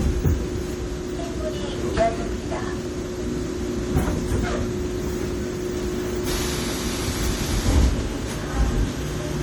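From start to finish the sound is swirly, smeared and hollow, with transients softened and blurred and a watery shimmer in the upper range, more damaged than a single lossy encode would leave it. This is likely generation loss: the audio has been decoded and re-encoded as MP3 several times, perhaps around five passes, with the character fitting 64 kbit/s. Each pass requantises on a shifted frame grid, so the noise and spectral gaps accumulate.

From 4.90 to 5.71 s a galloping dit-dit-dit of brief rasping buzzes breaks in, roughly 20 dB below the sound. These are GSM signalling bursts: a nearby 2G phone is exchanging short groups of radio bursts with the network, as it does while setting up a call or message, and the audio circuitry rectifies those pulses into sound, each group carrying the 217 Hz burst rate.

Almost immediately afterwards, from 5.74 to 8.68 s, the pattern becomes a continuous hard, raspy buzz at 217 Hz, rich in harmonics, about 20 dB below the sound and unrelated to it. 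This is GSM phone buzz, from a nearby 2G phone in a call. It transmits a burst 217 times a second without pause, and the rectified radio pulses produce a steady buzz at that rate.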